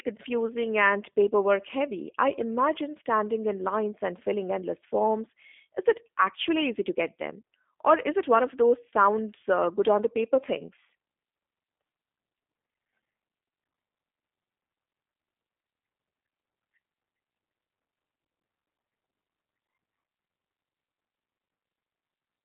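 Throughout the speech, the G.729 codec is plainly audible. Sound sits in a line band of 250 Hz to 3.5 kHz, with nothing above 3.6 kHz. It has a rough, synthetic texture that fits an 8 kbit/s pulse-excited model. That roughness, beyond the missing treble, separates it from plain telephone band-limiting.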